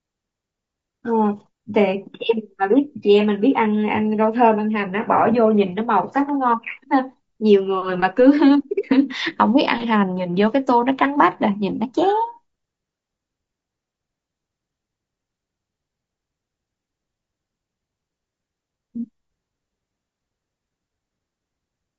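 The speech was likely squeezed through a low-delay AAC compression stage, the AAC-ELD coder used for video calls, at a rate that fits roughly 32 kbps. At that low bitrate, from start to finish the voice sounds rough and grainy, with noise filling the gaps between harmonics and a top band that sounds dulled or synthetic. The damage is plainly audible.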